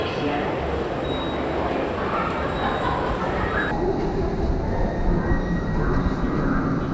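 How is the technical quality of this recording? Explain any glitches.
There's one clear glitch. From 3.71 s to the end, a wrong sample rate plays everything at half speed and a full octave lower, consistent with 32 kHz audio being clocked out at 16 kHz.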